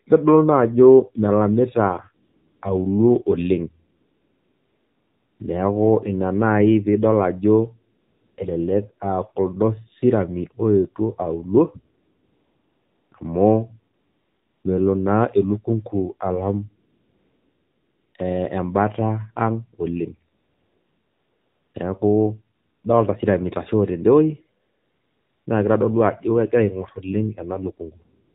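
The AMR narrowband mobile codec runs through the whole clip of speech. The voice has been squeezed into an 8 kHz-sampled channel, so nothing above 4 kHz survives and the sound is boxed in and thin. A vocal-tract model driven by a few pulses per short subframe rebuilds each 20 ms frame. At a low bitrate, which fits a mode around 7.4 kbps, that model plainly audibly leaves the speech buzzy and synthetic.

AMR comfort noise appears in ten pauses between 2.26 s and the clip's end. At each one the phone treated the talker as silent and stopped sending speech frames, and the receiver filled the gap with generated noise built from a rough level-and-spectrum description. The gaps run from 0.095 s to 1.42 s, the longest at 3.98 to 5.40 s, with a last brief one from 28.26 s. The real background drops out for a smooth, steady hiss that switches in and out.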